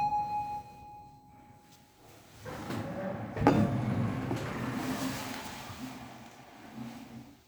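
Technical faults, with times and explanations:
No technical faults can be heard anywhere in this recording of sounds; the signal stays intact and continuous throughout.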